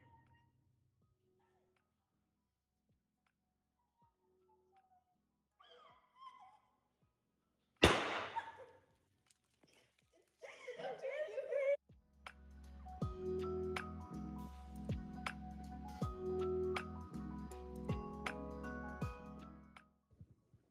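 Nothing in this one trips the ear: there's no dropout, glitch or distortion anywhere in it, so there's nothing to point to.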